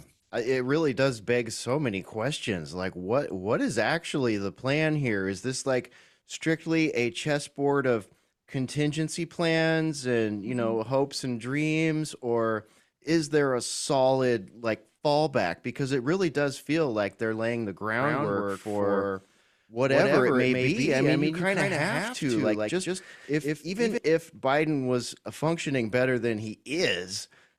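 From 18.02 to 23.98 s, right after "like they're laying the", a doubled audio track appears: a second full-band copy trails roughly 150 ms behind at about equal level, likely from a slower capture path. Unlike echo or reverb, it has no decay or room colour and switches on and off abruptly.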